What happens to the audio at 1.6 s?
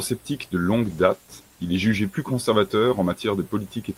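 At 1.6 s the sound is inside a call bitrate drop, from 0.85 to 1.93 s. Starved of bits, the encoder codes coarsely and trims the highs. It sounds rough and muffled, which fits a fall to about 15 kbps. Clarity returns before "plus conservateur".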